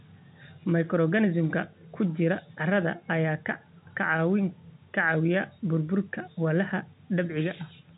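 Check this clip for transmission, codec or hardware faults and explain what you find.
No transmission, codec or hardware faults turn up in this clip.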